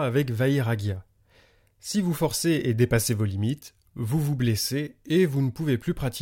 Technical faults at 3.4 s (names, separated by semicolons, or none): none